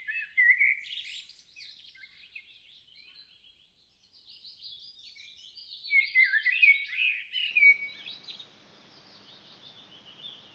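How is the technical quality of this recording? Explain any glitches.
The recording carries the band limit of a call codec, topping out near 8 kHz, which fits Opus at a low bitrate, and it has one glitch near the end.

From 7.51 s to the end, the input is likely switched to a poorer device: nothing above 6.9 kHz remains, so the sound turns duller. There is no gap at the switch and no real level jump, but new background noise appears about 35 dB below the signal.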